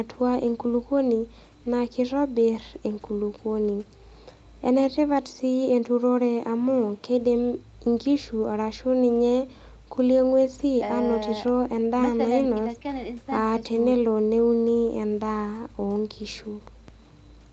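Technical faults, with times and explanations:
Nothing here counts as a technical fault: the speech has come through ordinary call microphone processing and a WebRTC call path with an Opus-style codec, and the audio simply stops at about 8 kHz, which is normal for that kind of call setup.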